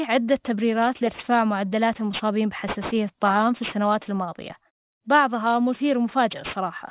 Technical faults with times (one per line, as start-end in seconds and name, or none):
0.00-6.91 aliasing